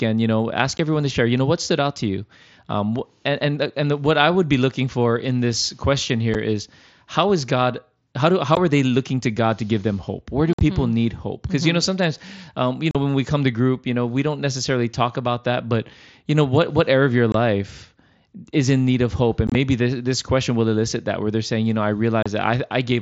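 At 0.78, 6.34 and 8.55 s, then 10.53–10.61, 12.91–12.95, 17.32–17.35, 19.47–19.55 and 22.23–22.26 s, the speech has unconcealed Bluetooth headset packet loss. Voice packets between headset and phone went missing and silence or an idle pattern replaced them, leaving holes with hard edges. Gaps step in multiples of 7.5 ms, which fits mSBC frames on this wideband link. At 10.53 and 19.47 s the losses scatter into a chopped crackle. Concealed loss would instead bridge the gaps smoothly.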